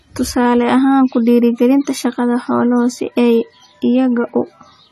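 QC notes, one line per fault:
Throughout, AAC compression: nothing is heard above 13.9 kHz, and the speech sounds dull and smeared, with a warbling, fizzy texture on sibilants, likely from AAC-LC at a low bitrate, around 32 kbps. A plain low-pass filter would cut just as cleanly but leave no warble.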